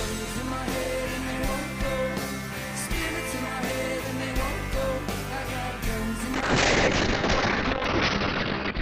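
At 6.34 s a call bitrate drop sets in and lasts to the end: the encoder coarsens sharply, consistent with a fall from roughly 48 kbps to about 7 kbps. Bandwidth narrows from 20 kHz to 6 kHz, leaving the audio muffled and rough, worst for about 1.9 s.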